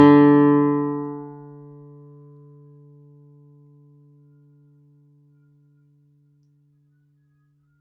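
A speech-oriented noise suppressor stays active for the whole clip and treats these everyday sounds as noise. It lets sharp onsets through but pulls down anything steady, including sustained tones, background ambience and reverberant tails, by roughly 15 dB. The level therefore pumps and flutters as the processor swings between passing and cutting, and decays thin out. This all sits within a call path whose bandwidth ends at about 8 kHz.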